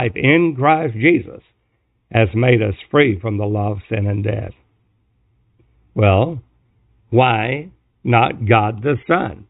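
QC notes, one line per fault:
Nothing stood out on listening to the speech in this recording.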